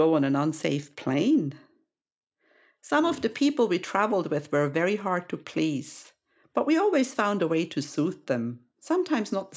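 Nothing stood out on listening to this speech recording.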